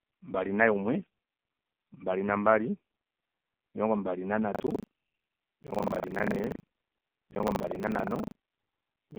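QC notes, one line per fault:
throughout, AMR narrowband mobile codec: The speech is squeezed into a telephone band of roughly 200 Hz to 3.6 kHz, with nothing at all above 3.6 kHz, and the codec damage is heavy: buzzy, synthetic vowels. That fits a low AMR-NB mode of around 5.9 kbps, where too few pulses drive the vocal-tract model to rebuild the sound faithfully. On a spectrogram, energy stops at a flat ceiling near 3.6 kHz, and the harmonics look blotchy and frame-stepped.
4.52 s to end, buffer tearing: From 4.52 s the speech takes on a steady robotic rattle at about 25 Hz that lasts until the clip ends. The write and read positions of the playback ring buffer have crossed, so roughly a third of each period replays audio from about 70 ms earlier, with hard joins on both sides. The waveform shows abrupt discontinuities every 40 ms. The spectrogram shows vertical striping at that spacing, present only while there is signal.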